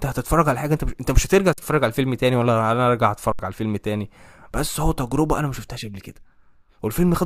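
Underrun with held sample at 1.53 s and 3.32 s: the output buffer emptied and the converter froze on its last value, flattening the speech for 46 ms (2048 samples), then 70 ms. Roughly that much audio was lost each time.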